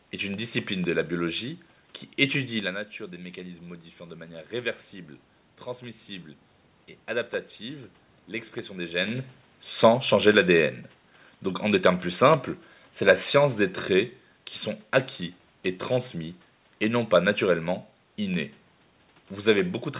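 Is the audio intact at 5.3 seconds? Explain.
No. At 5.3 s the automatic gain control is still rising, from 2.97 s to 6.36 s. After the speech input fell by about 13 dB, the gain climbs gradually by about 3 dB, so voice and room background swell together.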